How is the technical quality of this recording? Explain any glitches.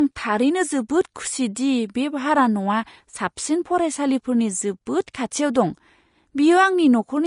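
The technical quality is clearly degraded by lossy coding throughout, with three brief smeared attacks.

Vorbis compression, throughout: the speech sounds hissy and grainy, with nothing above 10.5 kHz. This is likely coarse treble quantisation at a low bitrate around 35 kbps.

Pre-echo, at 0.89, 5.07 and 5.14 s: quantisation noise spreads about 10 to 12 ms ahead of sharp attacks, leaving a short hiss before each onset and softening it.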